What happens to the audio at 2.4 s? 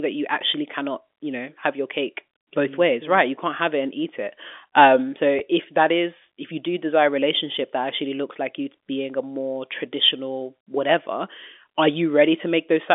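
Nothing goes wrong at 2.4 s: the audio is intact there, carried through the narrow G.711 telephone band as it is throughout.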